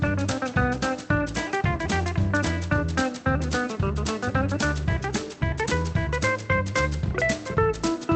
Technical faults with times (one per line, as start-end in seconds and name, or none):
none